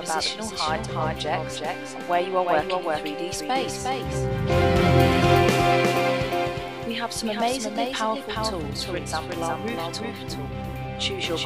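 A doubled audio track runs throughout: a full-band copy trails about 400 ms, roughly 5 dB down, likely from a second capture path, duplicating each spectrogram onset.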